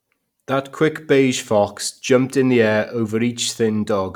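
Listening to this speech recording, nothing stood out as a technical problem at any point.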